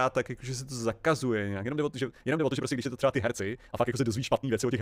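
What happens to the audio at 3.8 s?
At 3.8 s the speech sits inside a time-stretched section running from 1.53 s to the end, sped up 1.84 times, likely by splicing out short pieces. It sounds rushed with unchanged pitch, and the spectrogram shows compressed timing and splice seams.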